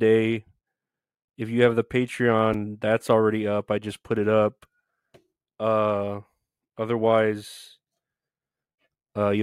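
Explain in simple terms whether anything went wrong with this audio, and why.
At 2.53 s, just before "that's already up I", a brief jumbled moment: chunks out of order, one 5.8 ms slice playing one slot late.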